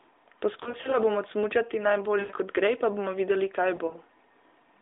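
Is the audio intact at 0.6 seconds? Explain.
No. From 0.64 to 0.98 s there are lost AMR speech frames. Radio errors corrupted five 20 ms frames, 100 ms in all, scattered with runs of up to 40 ms. The decoder repeated its last good pitch and vocal-tract settings at falling gain, so the speech briefly dips and warbles.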